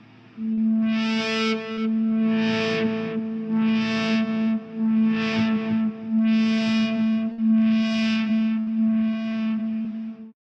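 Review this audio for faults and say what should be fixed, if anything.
There's short concealed packet loss at 0.53–0.59 s, 1.73–1.79 s and 9.82–9.86 s. The decoder bridged 20–40 ms holes by extending the preceding sound, leaving brief smears.

Two bursts of packet loss hit at 7.32–7.40 s and 8.60–8.68 s. About 60 ms each went missing, covered by a fading continuation before the audio jumps ahead.

To prevent it, deepen the jitter buffer and add forward error correction or redundancy so lost packets get recovered instead of concealed.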